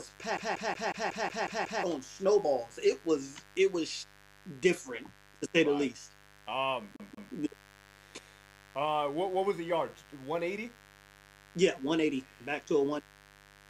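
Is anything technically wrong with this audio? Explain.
Yes, two things. There's mains buzz the whole way through, a raspy 50 Hz hum sitting roughly 25 dB under the sound. Something like a dimmer or rectifier, or a missing shield, lets sharp spikes in twice per mains cycle, so the harmonics climb into the kHz range.

Then the CD stuck on one turn, from 0.37 to 1.84 s and again from 6.96 to 7.33 s. A scratch keeps knocking the laser back a track, so the same 0.18 s snippet plays eight times, then twice, with a quick mute at each jump: that classic fast, even stutter.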